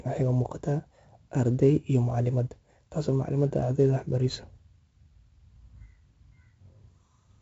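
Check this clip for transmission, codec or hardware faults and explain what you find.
One codec fault runs through the whole recording.

4-bit ADPCM compression, throughout: each sample is coded as a coarse 4-bit step from a prediction, so the error rides on the speech as gritty, level-following hiss, with smeared attacks. Damage is heavy, and nothing sounds above 7.7 kHz, which fits a 16 kHz, 64 kbps stream.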